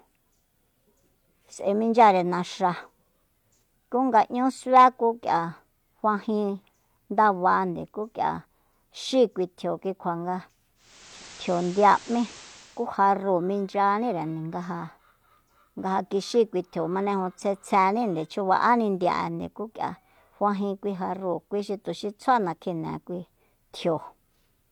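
From 10.75 to 12.90 s, hiss rises and level shifts about 2 dB: digital radio blending to analogue FM, with a half-second cross-fade.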